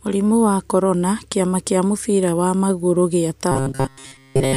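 From 3.52 s to 4.56 s the speech turns into a robotic sound from repeated short buffers: a stiff, metallic buzz near 134 Hz that only loosely tracks the syllables. The likely cause is audio arriving too seldom, with playback looping a fragment of about 7.5 ms and skipping most of the real signal. A spectrogram would show rigid horizontal harmonics spaced 134 Hz apart, and the waveform would show one short shape repeating at that fixed period.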